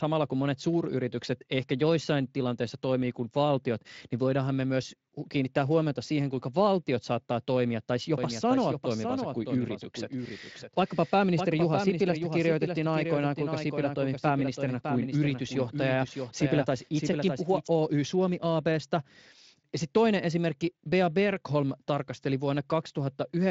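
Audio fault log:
8.18 to 17.68 s, doubled audio track: right after "valtiot saattaa toimia tai" a second full-band copy of the speech snaps in, running roughly 0.7 s behind and about 5 dB quieter, then cuts out just as abruptly. It has no decay or room colour, so it reads as a plain out-of-step duplicate. The likely cause is the same audio being captured again through a slower path, or an edit holding two offset copies. The copy carries the same light Speex coding as the rest, with nothing above 7.6 kHz.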